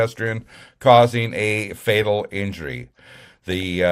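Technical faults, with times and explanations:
3.52–3.63 s, DAB burbling. For about a tenth of a second the sound is disturbed by short blips of noise. Weak reception lets bit errors slip past the error correction into the MP2 audio data. A small share of corrupted bits, around 0.15 percent, is enough to spoil eight frames. Wrong samples put short blips of noise in single sub-bands, and wrong scale factors make individual sub-bands jump in level for up to a frame, and that produces the burbling effect.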